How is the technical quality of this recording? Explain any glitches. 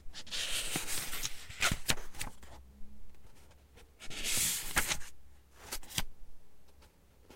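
No technical glitches can be heard anywhere in the recording. The sounds come through steadily, with no interruptions or disturbances.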